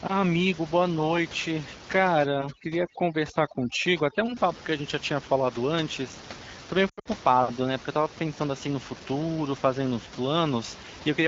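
A speech recording carried over AMR-WB (HD Voice), with room noise sitting about 15 dB below the voice, has two faults. From 2.26 to 4.37 s, overdone noise removal strips the quieter parts of the voice along with the noise. The noise reducer pushed individual frequency bands down whenever they came close to its noise estimate, so the background drops and breaks up into twinkling specks. On a spectrogram this shows as scattered isolated dots where continuous noise should be, with the weaker parts of the voice's harmonics gnawed away. From 6.89 to 7.08 s, lost AMR speech frames punch holes into the sound over about 160 ms, amounting to roughly 140 ms of missing audio. The pattern fits about seven dropped 20 ms frames, with the longest unbroken gap lasting 80 ms. The decoder filled each gap by repeating the last good pitch and vocal-tract settings at decreasing gain, so the sound briefly smears and warbles before fading, then returns rough for a moment. 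In the waveform the envelope sags in short steps, and the spectrogram shows frozen, stretched harmonics fading into gaps.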